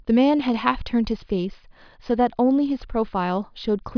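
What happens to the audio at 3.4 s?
Nothing goes wrong at 3.4 s; the speech carries on cleanly through that moment, with no dropout, click, distortion or other fault.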